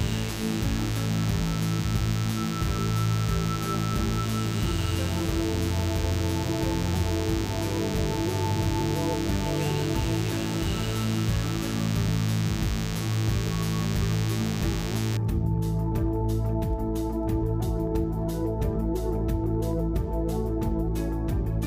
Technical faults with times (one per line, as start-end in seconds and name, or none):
0.00-15.17 DECT cordless phone buzz